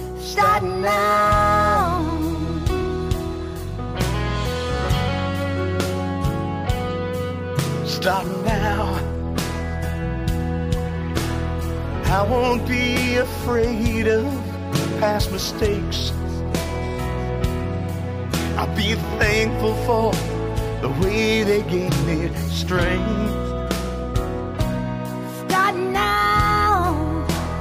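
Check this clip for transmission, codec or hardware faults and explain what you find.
No transmission, codec or hardware faults are audible anywhere in the clip.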